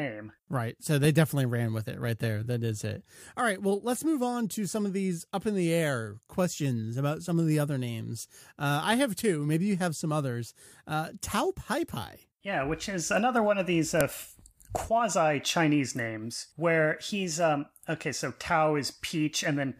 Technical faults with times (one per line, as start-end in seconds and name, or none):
14.01 file header played as audio